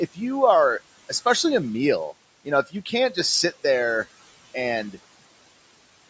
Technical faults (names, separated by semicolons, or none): noise suppressor artifacts